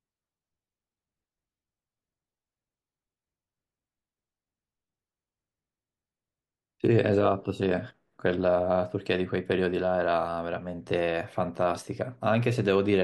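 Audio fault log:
No faults detected.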